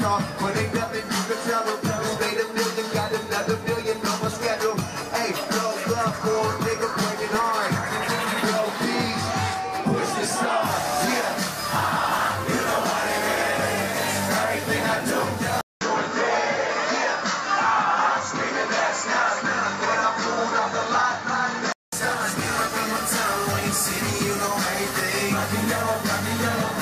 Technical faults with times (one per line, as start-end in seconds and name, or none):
6.99-7.42 DAB burbling
12.04-12.48 DAB burbling
15.61-21.92 input switched to a poorer device